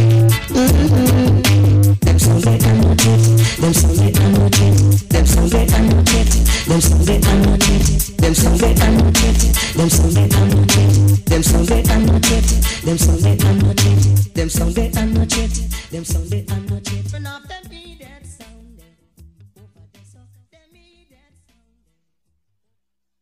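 From start to finish the audio suffers hard clipping. The signal reaches the converter about 16 dB hotter than it can pass, so every peak is sliced flat, and roughly a fifth of all samples sit pinned at the converter's limit. The waveform shows blocky, squared-off tops along the whole clip, and a spectrogram shows harmonic smearing stretching up into the high kHz range on each loud moment, heard as a harsh fuzz on every loud sound.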